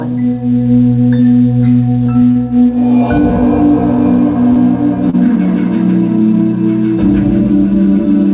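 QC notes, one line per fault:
2.31 to 2.37 s, short stall from a late packet: a packet showed up late, the jitter buffer ran dry, and about 41 ms of held sound got stretched in before playback carried on, so you hear a brief smear.
2.63 to 2.76 s, short stall from a late packet: same thing again, a smaller hold of about 16 ms plus a few extra ms, heard as a slight drag with a faint buzz or dip.
4.53 to 4.58 s, short stall from a late packet: the buffer emptied and the last bit of sound was held for about 24 ms, so there's a quick hiccup with nothing actually dropped.
5.10 to 5.15 s, short stall from a late packet: a late packet again, filled with about 35 ms of stretched sound, and it's audible as a small hitch through the narrowband G.711 A-law call audio, which stops at 4 kHz.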